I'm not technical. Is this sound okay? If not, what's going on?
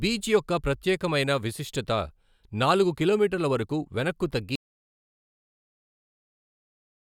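No. Audio dropout to silence at 4.56 s, right after "నాలుగు కిలోమీటర్ల వరకు వెనక్కు": the speech cuts to dead silence until the end, likely because the input was lost while recording continued.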